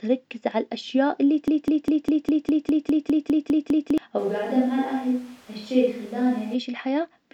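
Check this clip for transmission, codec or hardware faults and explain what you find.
Two faults stand out in this speech clip.

From 1.48 s to 3.98 s there is a broken-record loop. A fragment about 0.2 s long plays twelve times in a row, exactly the same each time. It sounds like a stuck, stuttering repeat with no forward progress. The likely cause is a stalled player, encoder or stream that kept resending the last piece it held. Whatever should have played in those seconds is gone.

From 4.20 s to 6.53 s there is a switch to a distant microphone. The sound turns roomy and hollow, with thinner bass. The loudness barely changes. Background noise rises to about 30 dB below the speech. The change in and out is abrupt. This likely means the close microphone dropped out and a farther one, such as a camera microphone, took over.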